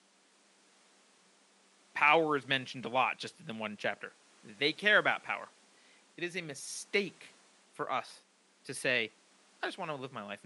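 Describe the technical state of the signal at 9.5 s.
At 9.5 s the speech is intact, with no technical fault; only the room's own background noise sits underneath, about 32 dB below the speech.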